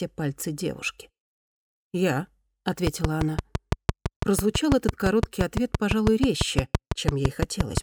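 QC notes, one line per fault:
2.87–7.78 s, train of clicks: a steady ticking kicks in and runs almost to the end, around 6 clicks a second at an even pace, so roughly thirty in all. Each click has much the same sharp shape and sits well on top of the sound, something like 20 dB hotter, so they poke through everywhere, quiet gaps included. That regular repeating pulse points to something injecting it, likely interference from nearby gear or a faulty connection or power supply.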